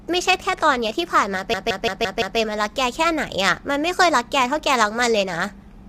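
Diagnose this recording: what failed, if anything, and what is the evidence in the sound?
Throughout the speech, the codec stage shows plainly audible damage: rough, grainy voicing with noise filling the gaps between harmonics and a thin, synthetic top band. This is likely low-delay AAC compression (AAC-ELD), whose short frames resolve pitch poorly. The grain fits a bitrate around 32 kbps. A spectrogram would show smeared harmonics and a patchy upper band.

From 1.54 to 2.39 s a system hang loop at the driver or buffer stage repeats one 170.67 ms slice five times, giving a machine-gun stutter at 5.86 Hz, which fits an 8192-sample ring buffer. The waveform shows identical blocks repeating, and the spectrogram shows vertical seams at each repeat.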